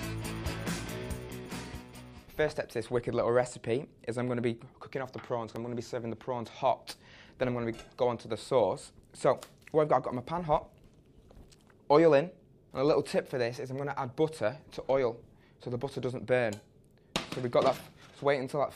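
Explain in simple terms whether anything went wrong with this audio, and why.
At 5.56 s there is likely a dropped buffer (overrun): the recording program fell behind, and a tiny chunk of sound, about a hundredth of a second, was overwritten and lost. The two sides are joined directly, so you hear a small jump.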